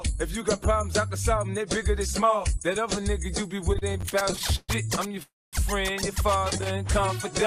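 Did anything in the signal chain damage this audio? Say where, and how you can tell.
Yes. Repeated stalls (stutter) from the network jitter buffer at 3.71–5.23 s (24 gaps, longest 131 ms) and 6.39–6.67 s; the waveform shows repeated, smeared stretches where late packets were concealed.

A call audio freeze at 5.23–5.55 s shows as a fading smear, then about 0.22 s of flat silence on the spectrogram, likely from packets held up in transit.

A jitter buffer slow-down at 6.72–7.32 s adds 44 ms, playing at 94% speed. The spectrogram shows stretched, same-pitch harmonics where pitch periods were repeated.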